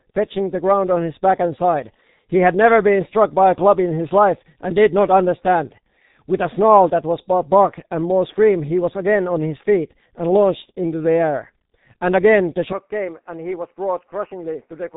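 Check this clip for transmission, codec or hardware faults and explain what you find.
Two faults are present: heavy low-bitrate codec damage across the whole speech clip, and a further drop in quality near the end.

G.723.1 codec, throughout: The speech was carried by G.723.1 at 6.3 kbit/s, which codes it in coarse 30 ms frames and refreshes its model of the voice only slowly. Nothing above 3.8 kHz survives, and the damage is heavy. The voice sounds muffled and hoarse, with consonants smeared and indistinct because their fast detail falls between frame updates.

Input switched to a poorer device, from 12.73 s to 14.97 s: The recording likely switched over to a lower-grade input such as a headset call profile or a different microphone. There is no gap at the switch. The band narrows further, with nothing passing above 3 kHz, so the already muffled sound turns duller and boxier. The level drops by about 5 dB, and a new background noise sits roughly 45 dB below the speech.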